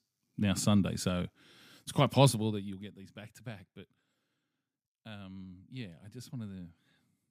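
Zipper noise runs from 2.26 to 2.96 s, while the speech level drops by something like 20 dB. The gain is being lowered in discrete jumps, around two hundred per second, with nothing smoothing the transitions between them. Each jump puts a tiny discontinuity into the waveform, and in quick succession these form a fine ticking buzz laid over the voice for the length of the fade.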